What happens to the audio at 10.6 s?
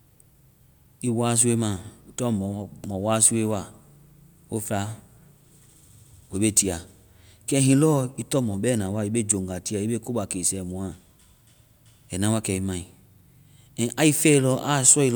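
Nothing goes wrong at 10.6 s; the speech carries straight through that moment with no dropout, click, distortion or other fault.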